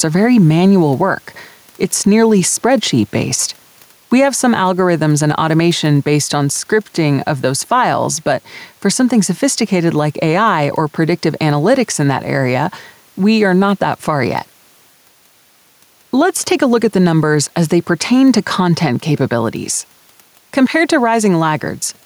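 Throughout the speech, gain pumping pulls the level down under each loud syllable by around 5 dB, with the room noise sitting about 39 dB below the voice, likely from excessive input gain driving a fast limiter. Unlike a noise gate, the background never cuts out.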